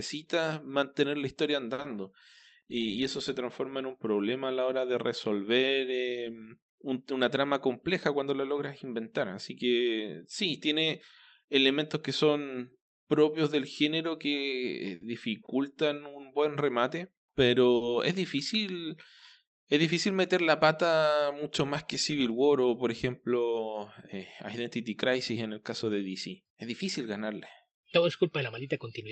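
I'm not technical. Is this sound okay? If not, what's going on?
No, there are three kinds of glitches in this speech.

Short stall from a late packet: at about 1.73 to 1.80 s and again at 1.82 to 1.86 s, just after "mantener la historia", a sound is held a moment too long while the system waited for late data. Nothing is lost, unlike a gap where a bit goes missing.

Jitter buffer speed-up: from 7.54 to 11.56 s, after "de resolver eh una", the system trimmed tiny slices to catch up on a backlog. The talking runs about 2% faster at the same pitch, so it is not chipmunk-like.

Scattered short gaps: between 14.95 and 17.83 s, from "propios del género que" up to "es difícil", roughly three tiny holes were patched over, the longest well under a tenth of a second. They sound like brief ticks or smears, spread out rather than one long held sound.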